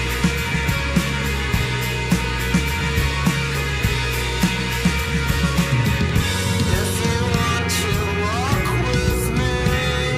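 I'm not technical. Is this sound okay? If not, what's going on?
No. Between 3.0 and 7.1 seconds there are periodic USB or driver dropouts: about five tiny gaps, roughly a millisecond each, spaced exactly 1.02 seconds apart. Each time, the computer briefly stalls the audio connection, drops a sliver of sound and leaves silence, heard as a regular tick.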